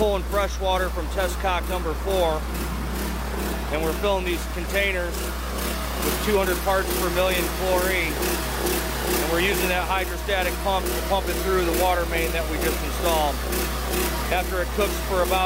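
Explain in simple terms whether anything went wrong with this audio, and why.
There's mains hum all the way through: a steady 60 Hz drone, nearly as loud as the sound itself, likely from a ground loop or a nearby transformer.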